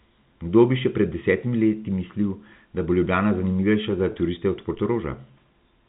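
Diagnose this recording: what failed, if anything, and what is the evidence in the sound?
A network fault: packet loss with pitch repetition at 4.12 to 4.14 s. About 20 ms went missing, which fits one lost packet, and the receiver filled it by repeating the last pitch period. The sound holds briefly with a slight buzz instead of dropping to silence or clicking, which rules out a driver buffer underrun.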